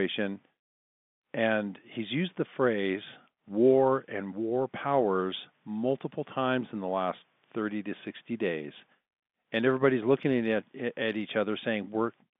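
No technical faults can be heard in the speech, which carries the narrow band of ordinary G.711 telephone coding, roughly 150 Hz to 3.6 kHz.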